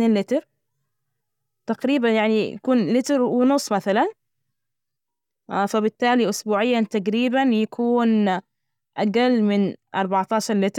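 No technical faults can be heard in the recording; the signal stays continuous and intact throughout.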